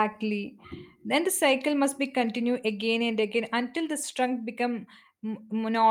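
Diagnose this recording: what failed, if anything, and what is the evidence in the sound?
Nothing failed here: listening through the whole speech recording, there's no point where the sound gives away a problem at any stage of the chain.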